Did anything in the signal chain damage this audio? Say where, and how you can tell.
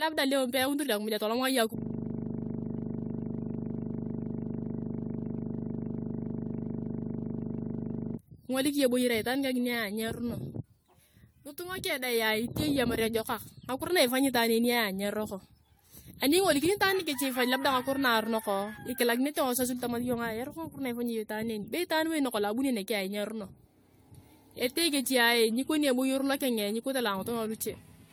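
Yes. At the driver or buffer stage, a system hang loop runs from 1.78 to 8.18 s: the host stalled while the audio hardware kept replaying one 40 ms stretch of its ring buffer. That slice repeats well over a hundred times, producing a steady 25 Hz buzz.

At the codec stage, the whole clip sounds swirly, smeared and hollow, with blurred attacks and nothing above 20 kHz. This likely comes from generation loss: repeated AAC-LC passes, around ten, each requantising on a shifted frame grid. The damage is heavier than a single pass at roughly 96 kbit/s would cause.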